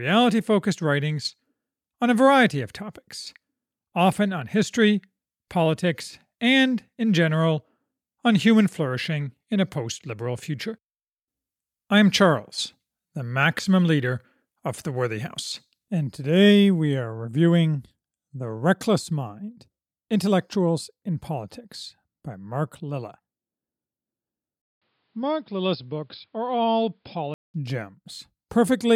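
At 4.14 s a single sharp click cuts through the speech, most likely dropped samples: a handful of samples vanish and the waveform jumps straight to a later value. Unlike a dropout, no sound goes missing, just one thin vertical line.

From 24.62 to 27.54 s the speech turns dull and boxy after a 200 ms silence, the level roughly 5 dB down and a new noise floor around 45 dB below, likely an input switched to a poorer device. The change in tone and noise together sets it apart from a simple filter.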